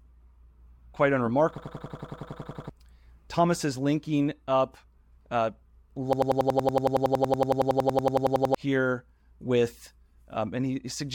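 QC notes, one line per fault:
1.58–2.69 s and 6.13–8.55 s, system hang loop: a 93 ms slice repeats 12, then 26 times, a 10.8 Hz machine-gun stutter. This fits a frozen 4096-sample ring buffer, and about one, then two seconds of audio are lost.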